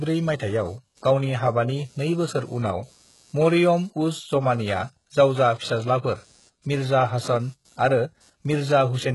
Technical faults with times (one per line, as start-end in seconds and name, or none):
0.00-9.15 computer activity noise
0.00-9.15 HE-AAC compression